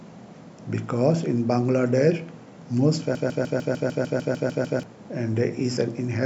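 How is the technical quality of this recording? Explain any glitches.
The recording has one clear glitch, a broken-record loop. From 3.15 to 4.83 s, a 150 ms fragment of the speech repeats exactly, back to back, 11 times, giving a rapid mechanical chatter. The likely cause is a player or stream stalling and resending the last piece of audio it held, so the speech that belonged in that span is gone. Unlike an echo or reverb tail, each repeat is identical and undecayed, and the speech resumes without ever catching up.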